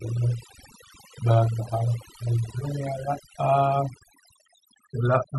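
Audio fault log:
Throughout, overdone noise removal. A noise reduction process was pushed too hard on this noisy speech recording. Any frequency band close to its noise estimate gets pulled right down or switched off. Quiet parts of the speech are caught in that net and vanish with the noise. Between phrases the background drops, dotted with twinkling, chirpy specks.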